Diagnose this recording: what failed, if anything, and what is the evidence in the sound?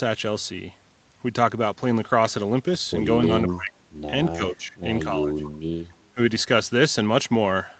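The speech ducks twice, around 3.53 to 3.73 s by roughly 20 dB and within 4.32 to 4.75 s by about 10 dB, which is likely speech suppressed in double talk. The call's echo canceller mistook the talker for loudspeaker echo and pulled the level down.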